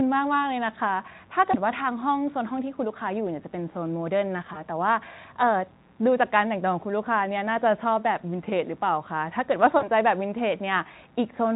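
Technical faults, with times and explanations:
1.51–1.56 s, 4.53–4.65 s, 9.77–9.86 s, VoIP packet loss concealed by the speech codec: brief, fading smears where 20 ms gaps (40 ms at 9.77 s) were filled by extrapolating the preceding sound.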